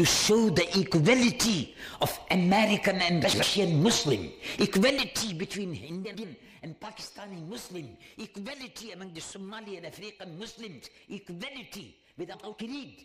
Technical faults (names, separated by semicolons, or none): frames out of order